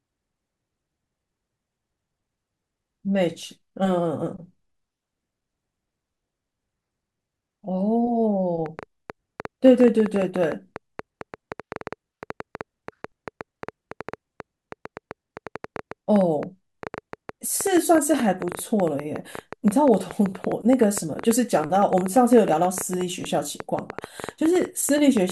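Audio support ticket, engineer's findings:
Train of clicks from 8.66 s to end of clip (25.3 s), about 7.9 per second at irregular spacing, roughly 150 pulses, peaks around 10 dB above the speech. Audible in pauses too. Likely external interference or faulty connection or power supply injecting pulses. Waveform: repeated narrow spikes; spectrogram: thin full-band vertical lines.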